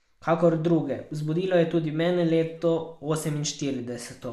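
Speech recording; no technical faults detected anywhere in the clip.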